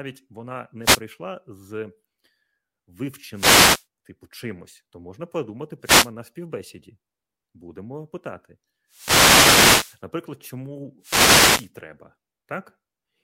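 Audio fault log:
0.81–1.02 s, 3.32–3.86 s, 5.81–6.11 s, 8.88–10.03 s, 11.00–11.71 s: wireless microphone noise hit. Reflections cancel the FM radio signal, so receiver noise rises into swishing static bursts over the speech.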